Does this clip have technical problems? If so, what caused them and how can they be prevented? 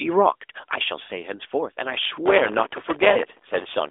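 Yes. Lost AMR speech frames at 1.04–1.09 s and 3.12–3.19 s: about 40 ms each, consistent with two 20 ms frames, where the decoder stretches its last good frame and the sound briefly warbles and sags. Better radio coverage or stronger error protection on the link would prevent this.

Processor overload crackle from 2.26 s to 3.89 s: the processor missed a couple of hundred deadlines on tiny buffers of roughly a millisecond or two, and each miss left a silent gap, producing gritty crackle over the narrowband phone-line sound. Larger audio buffers or a lighter processing load would prevent it.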